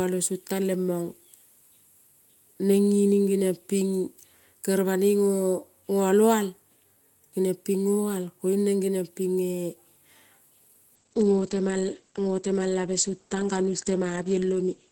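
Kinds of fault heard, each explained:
Call bitrate drop: From about 10.97 s to the end, the speech suddenly goes rough and watery, and it loses its top end. That's the encoder being squeezed from around 32 kbps down to 11 kbps after the call's bandwidth estimate fell, so everything's coded more coarsely and the audio bandwidth shrinks from 20 kHz to 8 kHz. It sits at that low rate for the last 3.9 s or so and never recovers.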